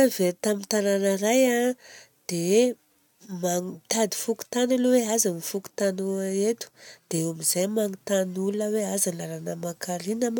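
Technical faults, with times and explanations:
No technical faults are audible.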